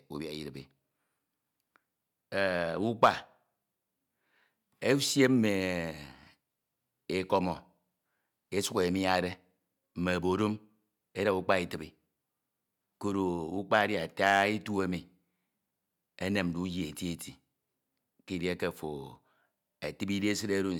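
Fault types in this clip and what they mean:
No faults can be heard anywhere in this recording.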